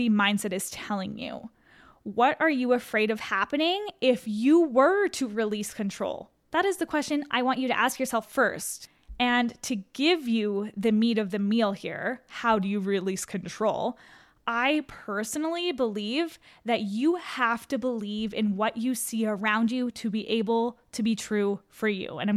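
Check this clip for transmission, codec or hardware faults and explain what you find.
The speech jumps in speed and pitch together four times. From 3.15 to 3.91 s, 7.10 to 8.23 s and 19.38 to 19.90 s it runs 6.3% fast and about a semitone sharp. From 12.57 to 13.62 s it runs 6.3% slow and about a semitone flat. These are drift correction steps, likely from clock-matching software changing its playback rate in one jump to refill or drain its buffer. Unlike wow or flutter, each shift starts abruptly, holds steady, then snaps back.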